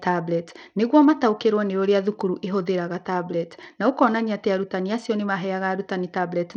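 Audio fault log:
Throughout: Bluetooth SBC compression. The speech has a dull, flickering top end, with treble dropping in and out and a gritty, grainy noise riding on the sound, plus aliasing. This is likely SBC coding with a small bit pool, which fits a bitrate around 80 kbps. The codec splits the signal into a few wide sub-bands and shares out too few bits, so the weaker high bands get nearly none and the rest are coarsely quantised.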